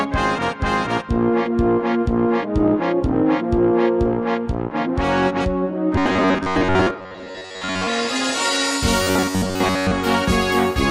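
From 5.96 to 7.87 s and 9.03 to 9.91 s, the sound becomes a rigid metallic buzz fixed at 93.8 Hz. This is robotic sound from repeated short buffers, likely a 10.7 ms slice replayed while most real audio is skipped. Unlike dropouts, nothing goes silent.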